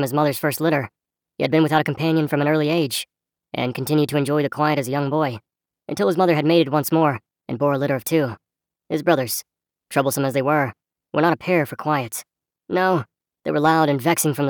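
Wrong sample rate, throughout the clip: the audio runs about 1.38 times too fast and sits roughly 5.5 semitones high, with speed and pitch shifted together. That ratio fits material recorded at 32 kHz being played back at 44.1 kHz without conversion.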